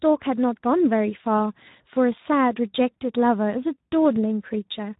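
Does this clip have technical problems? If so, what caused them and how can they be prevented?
Yes. Speex codec damage runs throughout the speech: it sounds hoarse and noisy and is band-limited with nothing above 3.8 kHz. The degradation fits a bitrate around 11 kbps, too few bits for the CELP excitation, so the voice turns rough. To prevent it, raise the Speex quality setting or switch to a modern wideband codec such as Opus.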